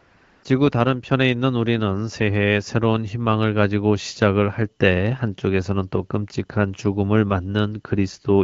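A short speech recording that opens with AMR comfort noise: for the first 0.43 s or so, the background is a smooth, even hiss rather than real room sound. That's the phone deciding nobody was talking and sending no speech frames, so the receiving end generated a stand-in noise from a rough description of the level and spectrum. At about 0.43 s the real signal takes over, and the background switches from synthetic to genuine. The speech after that carries the light coloration of AMR wideband (HD Voice) coding, with clear speech that fits a rate around 12.65 kbit/s.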